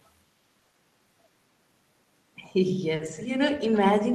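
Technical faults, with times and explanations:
0.59–3.25 s, scattered short gaps: about five brief dropouts, the longest around 40 ms, with 120 ms of audio lost and 140 ms rebuilt by extending the preceding sound. They show as frozen, stretched harmonics on a spectrogram.
3.74–3.78 s, echo leak: a faint delayed copy of the speech appears about 334 ms after the original, around 25 dB below it, likely from a loudspeaker's sound escaping the echo canceller. On a spectrogram it forms a weak ghost of earlier harmonics.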